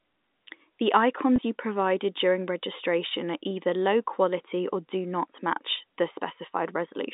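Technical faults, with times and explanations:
1.36–1.38 s, packet loss with pitch repetition: just before "you provided during registration", about 20 ms of audio goes missing, which fits a single lost 20 ms packet. The receiver fills the hole by repeating the last pitch period, so the sound briefly holds at a steady, slightly buzzy pitch instead of dropping out. The gap is too short for the repeat to fade into silence before real audio resumes, all inside the 200 Hz to 3.7 kHz band of the G.711 telephone line.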